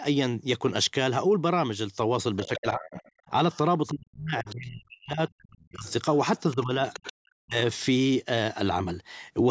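From 2.36 to 3.9 s the other side's voice leaks through, a second voice roughly 20 dB under the talker, likely from loudspeaker echo the echo canceller failed to remove. It returns briefly at 4.48 to 4.54 s and more strongly, at about 15 dB down, from 5.86 to 7.13 s. On a spectrogram it appears as faint, broken harmonic traces beneath and between the main speech.

Speech is suppressed in double talk from 2.42 to 3.32 s, 3.9 to 5.85 s and 6.54 to 7.56 s. The talker's level plunges by as much as 30 to 40 dB, and for the longest stretch, around a second and a half in all, the voice is turned down. The likely cause is the canceller mistaking the talker for echo and turning both down. The waveform shows abrupt notches in the envelope, and the spectrogram shows the talker's energy dropping away.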